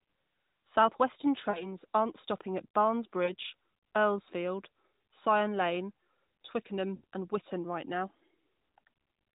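Lost AMR speech frames occur at 1.50–1.73 s, just before "aren't stopping at", then at 3.24–3.35 s and 6.96–7.04 s. The decoder covers 40, 40 and 80 ms of gaps by repeating the last pitch with falling gain, so the sound is drawn out and fades. A spectrogram shows frozen, dimming harmonics, and the waveform sags before recovering.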